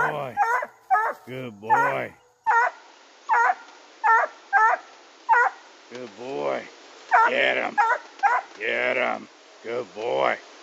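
At 2.47 s the sound turns duller and stays that way to the end. Nothing above 7.6 kHz remains. A new noise floor appears, roughly 30 dB down. Level barely changes, with no gap. The input likely switched to a poorer device.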